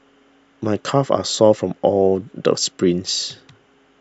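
Nothing stood out as a technical fault on listening to this speech recording.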